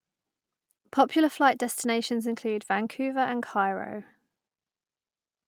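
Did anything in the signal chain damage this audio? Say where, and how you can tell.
No, nothing in this speech recording stood out as damaged on listening.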